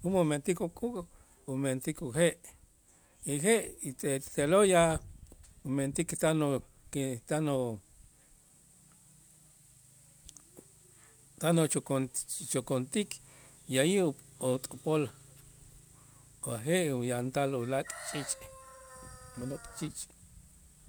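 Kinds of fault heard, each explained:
Nothing to flag here; the speech comes across without any dropouts, clicks, distortion or other glitches worth noting.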